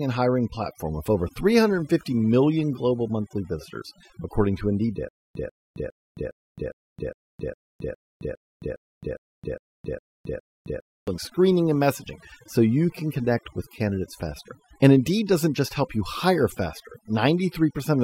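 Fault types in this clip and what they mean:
Overdone noise removal: Heavy noise reduction runs throughout, pulling bands near the noise floor down and leaving twinkling specks in near silence.
Stutter with silent gaps: From 5.09 to 11.08 s, a 141 ms fragment repeats 14 times with 267 ms of silence between, likely a stalled stream, before "screening and messaging so".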